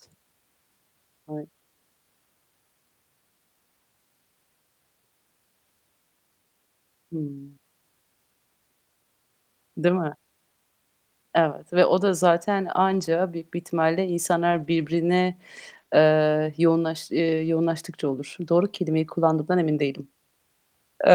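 A speech clip with two kinds of network fault. The first is lost packets rebuilt from error correction. It appears at 12.89 to 13.07 s, 14.51 to 14.97 s just after "büyük bir ihtimalle", 15.69 to 15.79 s, and 17.25 to 17.47 s. The rebuilt stretches last about 100, 240, 60 and 120 ms. There is no gap. Instead the sound turns rougher and noisier for a moment. That happens because the decoder plays a low-bitrate copy of each lost packet, carried inside the next one. The second fault is short concealed packet loss. It comes at 15.81 to 15.85 s and again at 15.85 to 15.89 s, right before "ııı yoğunlaş". Each hole is about 20 ms. The receiver had nothing to decode there. So it stretched the last sound forward and blended back into the real audio. The result is a brief smear just ahead of those words.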